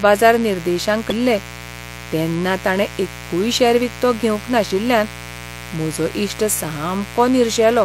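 A mains buzz runs under the speech from start to finish, sitting about 15 dB below it. Its fundamental is 60 Hz, but what makes it a buzz rather than a hum is the rasp. Sharp switching spikes, of the kind a dimmer, a rectifier or an unshielded cable lets in twice per mains cycle, fill the spectrum with 60 Hz harmonics reaching into the kilohertz range. A plain hum would be a smooth, low tone.

Just after "बाजार निर्देशांक", from 1.10 to 1.12 s, there is damaged data in a compressed stream. The encoded bytes at that point are corrupt, so the decoder misreads them, loses frame sync and hunts for the next valid header. The result is a brief glitch of about 20 ms.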